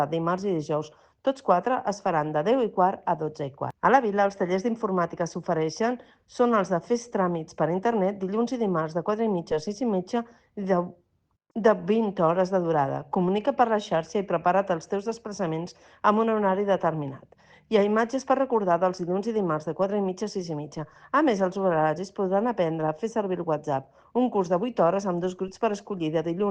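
Nothing in this recording stands out as a technical fault; it just runs along without anything going wrong that a listener would catch.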